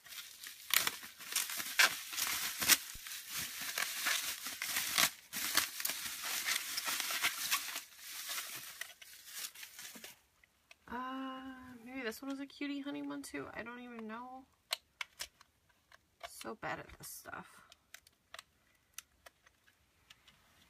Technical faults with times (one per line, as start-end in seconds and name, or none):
2.95-3.01 phantom power thump